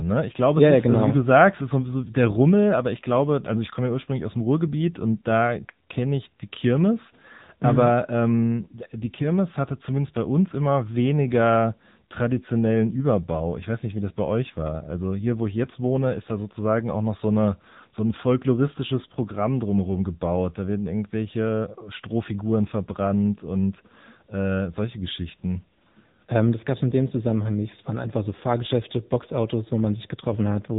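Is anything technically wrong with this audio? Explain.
Yes. Throughout the speech, the AMR narrowband mobile codec has left plainly audible damage. The audio carries nothing above 3.8 kHz, so sibilants and consonant detail are gone and the voice sounds boxed-in, like a phone call. This codec models the vocal tract and excites it with a handful of pulses per short subframe, and at low bitrate that coarse excitation turns buzzy and synthetic. The degree of roughness fits AMR-NB running near 8 kbps.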